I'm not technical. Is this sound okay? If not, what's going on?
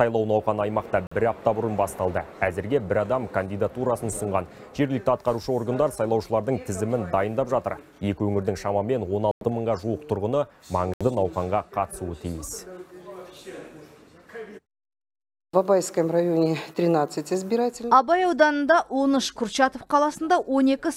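No. The sound briefly cuts out to silence three times: at about 1.07 s for 45 milliseconds, at 9.31 s for 99 milliseconds, and at 10.94 s for 70 milliseconds. The likely cause is a Bluetooth stall: wireless interference held up the audio on its way to the headphones, which ran out of sound and paused until it arrived. Unlike a skip or a click, each gap is clean silence, and playback then resumes.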